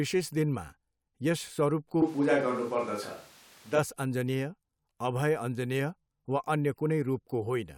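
From 2.02 s to 3.78 s the speech turns roomy and hollow, with thinner bass: a switch to a distant microphone, likely because the close microphone dropped out. Level barely changes, but background noise about 30 dB down appears. A spectrogram shows hard edges and weaker lows.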